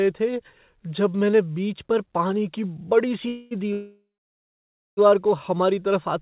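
At 3.28 s the sound stalls into a fading buzz for 0.23 s. A longer call audio freeze follows from 3.73 to 4.99 s, decaying into about 0.93 s of silence. Packets were likely held up, emptying the jitter buffer. Unlike a dropout, playback resumes exactly where it stopped: nothing is lost, only delayed.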